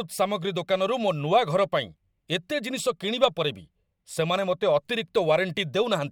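Nothing here stands out as a technical fault, so there's really nothing to walk through in this bit of speech.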